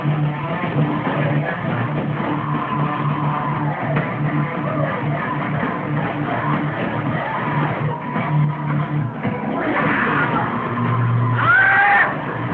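No technical faults detected.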